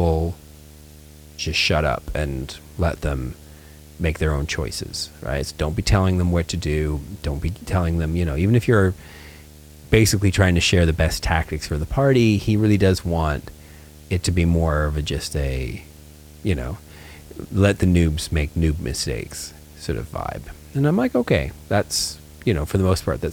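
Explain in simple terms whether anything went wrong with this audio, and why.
A steady low buzz with a gritty hiss layered on top runs underneath the speech from the first second to the last, quieter than the talking but never going away. That is video or display buzz: a screen or its video cable leaked interference into the audio wiring. The buzz sits at 75 Hz, which matches a display refreshing its picture 75 times a second, so the hum is the picture's own rhythm getting into the sound.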